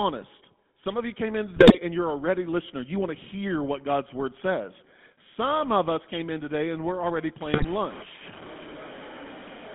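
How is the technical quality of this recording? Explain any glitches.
The recording has poor technical quality, with codec coloration throughout and several distinct glitches.

GSM full-rate codec (whole clip): The sound is band-limited to roughly 150 Hz to 3.5 kHz. Pulse-driven vocal-tract modelling, consistent with 13 kbit/s full rate, gives a plainly buzzy, gravelly roughness.

GSM bit errors (1.56 to 1.79 s, after "of you came in", before "and you're already listener"; and 7.53 to 7.65 s, after "today and we're already"): Corrupted decoder parameters distort the spectrum and level across several frames, producing squawks, pops and gargling.

Low bit depth without dither (7.41 s to the end, after "today and we're already"): The sound turns grainy and gritty, with signal-following error noise only about 10 dB below the signal. The likely cause is truncation to roughly 5 bits without dither.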